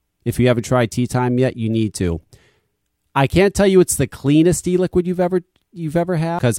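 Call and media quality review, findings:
Compressed frames skipped at 6.39 s, near the end of the speech. Audio jumps ahead roughly 0.7 s. Probable component: decoder or container, dropping damaged or missing frames. A jump of that size fits about seven frames of 92.9 ms. Distinguishing feature vs. a dropout or buffer glitch: no silence gap. At the join, the following material arrives early.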